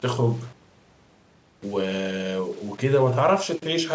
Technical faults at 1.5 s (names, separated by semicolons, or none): low bit depth without dither